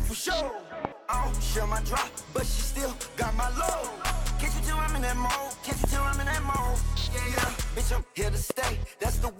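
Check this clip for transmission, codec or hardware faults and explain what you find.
There's one fault type here, loud pops, at 0.85–0.87, 3.69–3.71, 5.84–5.86, 7.38–7.45 (a quick double) and 8.50–8.53 s. Each is a sharp thump jumping well above the sound, which carries on underneath. Likely a voltage spike from a switch, static or driver glitch.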